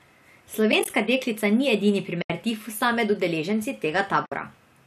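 Speech with AAC frame loss with muting: brief soft-edged holes at 0.72–0.90 s (several short gaps, the longest around 20 ms, scattered before "deklica ni edini"), 2.22–2.30 s (between "deklica ni edini" and "tifusa med udeleženci"), and 4.26–4.32 s (after "tifusa med udeleženci"). Lost frames were decoded as silence, and the overlapping windows fade each hole in and out. A light coding texture, likely from low-delay AAC, also runs through the clip.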